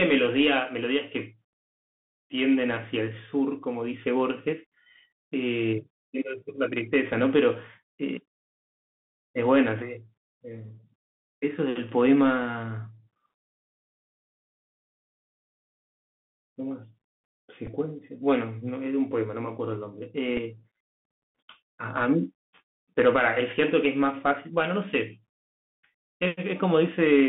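Throughout the speech, the Bluetooth CVSD headset codec squeezes everything into a narrow telephone band, roughly 150 Hz to 3.6 kHz, which fits CVSD's 64 kbps one-bit delta coding. The damage is plainly audible: loud, bright passages overrun the adapting step size and distort, s sounds come out scratchy, and a granular hiss sits under the voice. On a spectrogram the energy stops abruptly near 3.6 kHz, with a fine noise floor filling the band.

At 17.67 s a Bluetooth headset packet repeated: the link dropped audio and the chip decoded the previous packet's bits again, covering about 7.5 ms, which points to two lost 3.75 ms packets. It is heard as a very short burst of the repeat buzz near 267 Hz. At 20.37 s a shorter repeat of about 3.8 ms, consistent with a single packet, gives a small tick. In the waveform each appears as a tiny copied segment with a discontinuity at its edges, and on a spectrogram as a faint vertical line.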